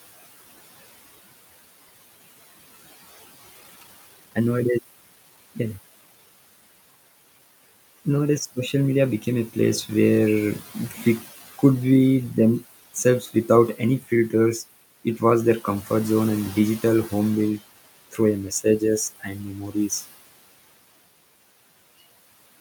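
It's a speech clip where a noise suppressor is pulling the steady background down by about 16 dB all the way through, so the residue pumps between phrases and rises underneath the talking. At 3.55 to 3.57 s there's a skip ahead: roughly a second and a half of audio is simply gone, joined straight across with no fill, which points to audio being discarded while later packets were already queued. Right after, from 3.61 to 5.38 s, just before "yeah yeah", you get a jitter buffer speed-up, with playback running at about 129% speed at unchanged pitch as the receiver trims around half a second of excess buffered delay. Around 19.19 to 20.03 s there's speech cut by the noise suppressor: it mistakes bits of the talking for noise and ducks them by up to about 14 dB, roughly half a second in total, so those parts sound swallowed. The room noise itself sits about 19 dB under the speech.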